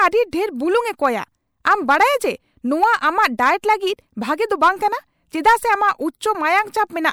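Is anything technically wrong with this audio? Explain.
Yes. Brief hiss smears ahead of sharp speech onsets, from about 0.31 to 0.33 s and at 3.38, 3.62 and 6.20 s, softening each attack. This is pre-echo: the codec spread quantisation noise sized for the loud onset across its whole block, into the quiet moment just before it.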